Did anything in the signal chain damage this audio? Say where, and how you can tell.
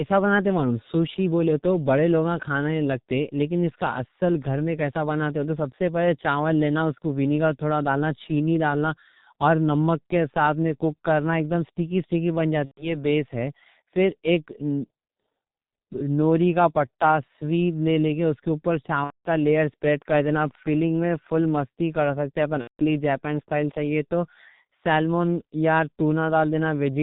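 Yes. At the codec stage, heavy G.723.1 coding runs throughout. The speech is muffled and hoarse, with nothing above 4 kHz and smeared consonants, consistent with roughly 6 kbit/s.

On the network, VoIP packet loss concealed by the speech codec occurs at 12.65–13.05, 19.04–19.28 and 22.61–22.82 s. The decoder extrapolates the last frame into a fading buzzy tone or coloured noise, and the speech then stays weak or distorted.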